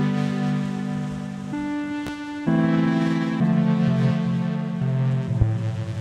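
Loud pops break into this music clip at 2.07–2.10 s and again at 5.41–5.45 s, each a single sharp crack of about 30 ms sitting on top of the music, which continues beneath it. The first rises roughly 10 dB above the surrounding level, the second closer to 15 dB. The likely cause is a brief voltage spike, perhaps from a plug, switch, static discharge or driver glitch, that was shaped by the downstream circuitry into an audible click.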